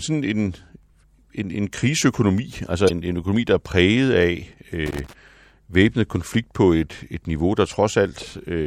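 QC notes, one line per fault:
2.86 to 2.91 s, damaged data in a compressed stream: a short chirp, squawk or click cuts through the speech, lasting about 40 ms. Some of the compressed bytes at this point were wrong or missing, so the decoder could not make sense of the frames there, produced a brief garbled burst, lost its place and jumped forward to the next frame header it could find before playing on cleanly.
4.86 to 5.13 s, loose connector crackle: an irregular patch of scratchy crackle lasting roughly a quarter of a second sits over the speech, uneven in texture rather than a single click. This is a worn or dirty contact in the signal path that rapidly made and broke connection as it shifted. Each break chopped the signal for an instant, and any DC present on the line turned those interruptions into pops, together forming the rough scratching burst.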